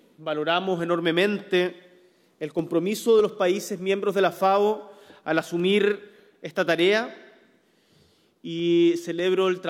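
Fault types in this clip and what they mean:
Clock drift buffer slips: two devices likely run on separate clocks, roughly 300 ppm apart, so the buffer between them creeps until about seven samples are dropped or repeated. The result is a regular click every 0.6 s, about fifteen in all, from 0.2 s to 9.2 s.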